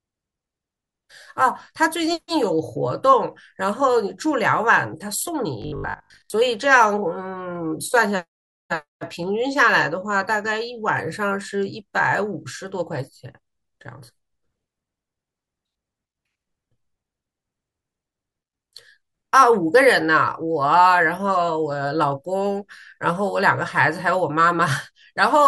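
From 5.62 to 6.30 s, robotic sound, likely from repeated short buffers: a rigid 50 Hz buzz, showing as evenly spaced 50 Hz harmonic stripes and a waveform repeating every 20 ms.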